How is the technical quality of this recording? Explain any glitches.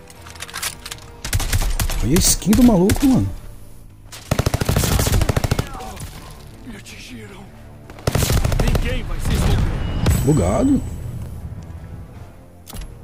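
The technical quality of this recording is sound, with no glitches to explain.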